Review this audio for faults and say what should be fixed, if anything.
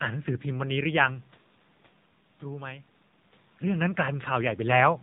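The whole clip runs through the AMR narrowband mobile codec. Everything above 4 kHz is gone, and the voice sounds plainly buzzy and synthetic, which points to a low AMR-NB mode around 7.4 kbps, where very few pulses drive the vocal-tract model in each frame. The room noise underneath also picks up some of that warble. To prevent it, carry the call over a wideband path such as AMR-WB or EVS, or at least negotiate a higher AMR mode. The level shifts around 1 s and 3.5 s are just the talker moving.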